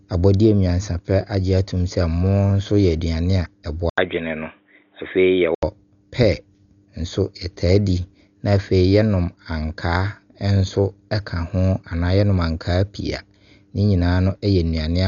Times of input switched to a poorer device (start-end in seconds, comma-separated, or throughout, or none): 3.90-5.63